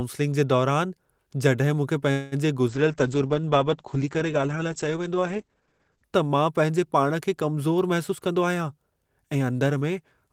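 At 2.11 s the sound stops moving forward. For about 0.2 s the last sound is stretched into a fading buzz that never reaches silence. Then the audio resumes where it stopped, with nothing lost. This call audio freeze was likely caused by delayed packets emptying the jitter buffer.

From 2.70 s to 6.16 s the speech turns rough and muffled. This is a call bitrate drop. The top of the spectrum falls from 20 kHz to 8 kHz. The coarse coding fits an encoder cut from about 32 kbps to 10 kbps, held at its lowest for about 3.4 s.

From 8.11 s to 9.81 s the speech hurries. This is a jitter buffer speed-up. It plays at 110% speed, yet the pitch stays the same. Short pitch-period pieces are cut out again and again. In total about a fifth of a second is removed to reduce the built-up delay.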